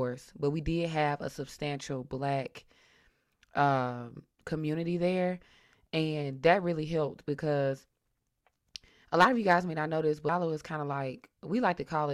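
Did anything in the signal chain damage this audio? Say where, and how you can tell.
Yes. Damaged data in a compressed stream shows up at 10.29 s as a brief glitch in the speech. This is a codec or storage fault: corrupted bytes make the decoder misread a frame, lose sync and hunt for the next valid frame header.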